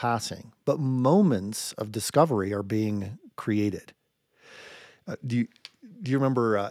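No technical faults are audible anywhere in the speech recording, and the signal holds steady throughout without any disturbance.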